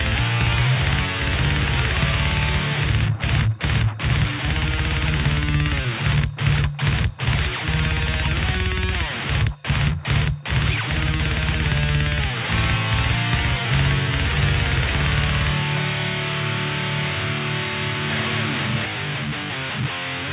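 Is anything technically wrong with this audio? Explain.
No, nothing technically wrong can be heard here.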